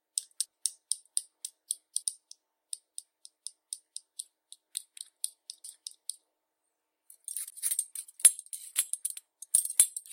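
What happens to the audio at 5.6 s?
At 5.64 s the decoder skips compressed frames: whole frames are either missing from the stream or rejected as corrupt, so they are never played. The sound jumps ahead by about a tenth of a second of material, with the gap spanning 5.64 to 5.74 s. The sound resumes slightly further along than it should.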